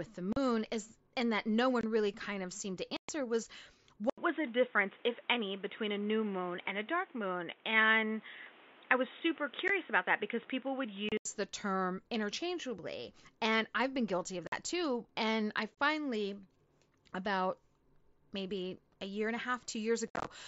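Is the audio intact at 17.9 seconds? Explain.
Yes, the speech at 17.9 seconds is intact, with no fault at that moment.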